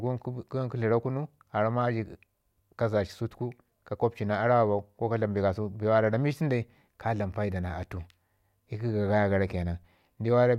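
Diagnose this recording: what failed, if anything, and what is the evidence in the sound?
No fault detected in this recording.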